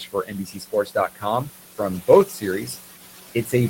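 Noise suppressor artifacts run throughout: the room noise, sitting about 13 dB below the speech, is pulled down about 15 dB between phrases and leaves a faint residue. Speech cut by the noise suppressor occurs from 0.0 to 1.25 s (roughly 0.7 s affected, about 16 dB deep), 2.26 to 2.44 s (about 13 dB) and 3.35 to 3.53 s (about 10 dB). The suppressor mistook quiet speech for noise, so those parts sound swallowed and faint.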